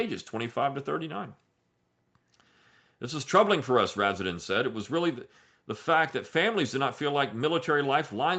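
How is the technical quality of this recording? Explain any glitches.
No technical faults are audible.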